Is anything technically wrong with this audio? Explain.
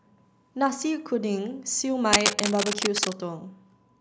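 Yes. From 2.13 to 3.14 s there is cable scratch noise: dense, uneven crackling bursts roughly as loud as the speech. It is likely a worn cable or connector being moved, its contact resistance jumping rapidly. Unlike steady hiss or isolated clicks, it arrives as an irregular, rustling cluster.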